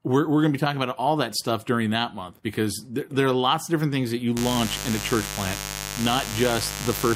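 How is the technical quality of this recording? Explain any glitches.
The recording has one clear fault. Mains buzz, from 4.36 s after "different things that you" to the end: switching spikes at twice the 50 Hz mains rate spread harmonics into kilohertz, giving a steady, raspy buzz roughly 10 dB under the speech.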